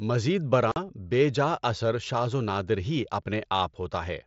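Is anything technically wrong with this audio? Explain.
Yes. From 0.72 to 0.76 s there is unconcealed Bluetooth headset packet loss. Speech packets between headset and phone went missing, and silence or an idle pattern filled the roughly 45 ms gap, which fits about six lost packets. The result is a sudden hole with hard edges in the wideband mSBC speech.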